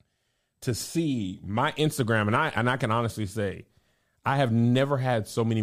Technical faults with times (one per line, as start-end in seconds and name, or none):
none